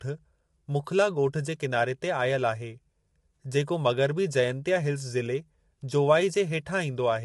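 Throughout this speech clip the voice sounds rough and grainy, with a hiss-like noise filling the gaps between the pitch harmonics and nothing at all above 11.6 kHz, so the top end feels cut off and thin. The damage is plainly audible from start to finish. The likely cause is low-delay AAC compression of the AAC-ELD kind used in video calls. Its short frames resolve harmonics poorly, and the degree of roughness fits a bitrate of around 32 kbps.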